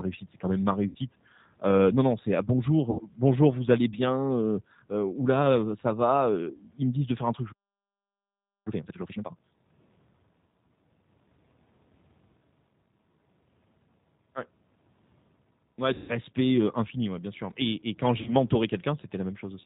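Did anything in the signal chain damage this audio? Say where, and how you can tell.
Yes. The G.729 codec runs throughout: band-limited below 4 kHz, roughly synthetic speech, matching an 8 kbit/s codec rebuilding each 10 ms frame from filter and pulses.

VoIP packet loss concealed by the speech codec, a network fault, appears at 0.89 s after "c'est quand même ma" and at 2.91, 15.94 and 18.22 s. The decoder stretches its last frames into a fading buzz or coloured noise, covering 60, 80, 140 and 40 ms gaps.

A playback stall runs from 7.52 to 8.67 s after "faire un truc je". The audio halts mid-flow for 1.14 s, likely because the player's buffer ran dry.

Time-compressed catch-up follows from 8.67 to 9.81 s. The player trims its backlog by cross-fading out small segments, so the speech plays at 2× speed at normal pitch.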